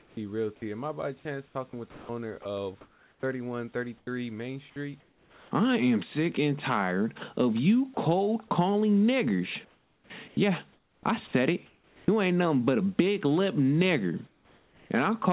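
From 0.00 to 0.17 s the real background gives way to comfort noise. It is steady, featureless and about 8 dB quieter, likely from discontinuous transmission filling the pause.

From 0.15 to 0.17 s the onset is clipped by the voice detector. The first 20 ms were likely never sent, so the speech starts abruptly.

From 1.46 to 4.07 s, just after "I by chance", the sound is chopped by the voice detector. It likely toggled repeatedly, swapping about 840 ms for synthetic fill, so the speech has holes.

From 5.00 to 5.51 s, just before "I am sick and", comfort noise again replaces the background. It is flat and about 4 dB quieter, likely during a transmission pause.

At 7.94 to 7.97 s, right after "and tired of you", the sound is dropped by the voice detector. About 30 ms likely went unsent and became steady noise.

From 9.65 to 12.08 s the voice detector chops the sound again. About 1.3 s is likely replaced by fill, leaving gaps.

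From 14.27 to 14.90 s comfort noise replaces the background once more. It sounds smooth and about 4 dB quieter, likely from the sender pausing transmission.

Across the clip, nothing is heard above 4 kHz, which fits a narrowband call codec.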